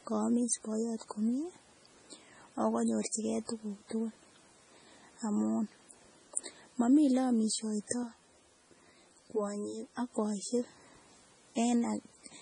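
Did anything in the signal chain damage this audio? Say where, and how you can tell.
Yes. Throughout the clip the speech has a watery, swirling texture, with weak spectral detail flickering in and out from frame to frame and smeared consonant onsets. Nothing is present above 10.5 kHz, a fixed treble cut. Together these point to heavy MP3 compression, likely at the codec stage, at a bitrate that fits about 24 kbps. The encoder runs short of bits, discards low-energy frequency lines and truncates the top band.

From 8.03 to 10.12 s the sound turns hollow and phasey, with a set of fixed notches that starts near 40 Hz and repeats at even spacing up the spectrum. This is channel delay (comb filtering). The pattern fits one channel arriving roughly 10 ms late, probably from a buffer or driver misalignment, before the two were summed to mono. Content common to both channels cancels wherever the delay puts them half a cycle apart.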